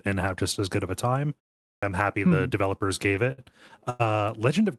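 Clipped start after a pause at 1.73 to 1.83 s: after about 0.41 s of silence, the output device had to wake and settle again, so roughly the first 95 ms of the returning speech never plays, and the word cuts in abruptly, missing its onset.

Repeated stalls (stutter) from 2.87 to 3.40 s: packets kept arriving too late for playback, so the jitter buffer drained six times. Each time the receiver stretched the last sound, filling 112 ms in total with gaps up to 60 ms, about 21% of that span. The speech drags and stutters but loses nothing.

Short stall from a late packet at 3.90 to 4.02 s: a packet missed its slot after the network delay jumped by 98 ms, emptying the buffer. The receiver held the previous sound for 98 ms, then resumed exactly where it stopped, so one sound lingers unnaturally with a faint buzz or dip.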